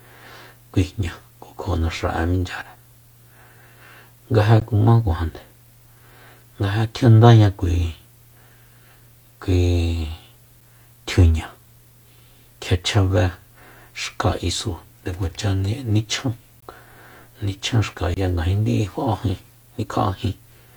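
Gaps between stream segments at 4.60 s, 10.61 s and 16.60 to 16.63 s: the speech is cut by brief holes of silence with hard edges, lasting about 14, 6 and 21 ms. They fall almost exactly 6 s apart, which points to 6-second stream segments whose time stamps don't quite meet. The player fills each gap with silence, so nothing is lost; the sound just stops and restarts abruptly.

CD skip at 18.14 to 18.17 s, just before "ngajin di'i": the sound mutes for roughly 30 ms and resumes from a different point. This happens when the laser is knocked or meets a flaw and jumps to another turn of the disc's spiral. The player briefly mutes while it relocates and continues from the new position, so the speech is heard as a short dropout followed by an abrupt jump in the flow.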